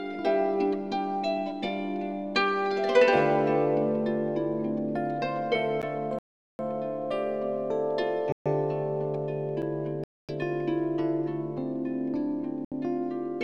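The audio has two kinds of fault. A block of digital silence hits at 5.82 s (12 ms, which fits a 512-sample buffer) and at 9.62 s (8 ms): the sound cuts out and back with no fade, heard as a tick or dip, probably as output buffers went unfilled. What sounds like a Bluetooth stall cuts the audio to silence from 6.19 to 6.59 s, 8.32 to 8.46 s, 10.04 to 10.29 s and 12.65 to 12.72 s, likely because interference delayed packets and the headphone buffer ran dry.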